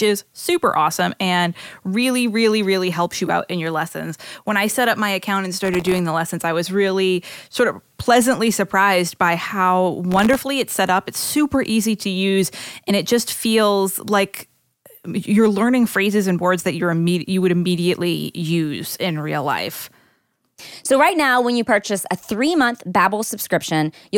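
From 5.65 to 5.99 s and again from 10.12 to 10.35 s, processor overload crackle appears. Runs of sub-millisecond buffers miss their deadlines and drop to silence, producing gritty tearing rather than one isolated click. At 20.59 s, compressed frames are skipped. Roughly one frame, about 30 ms, vanishes, consistent with a 26 ms frame. The audio jumps ahead by that much.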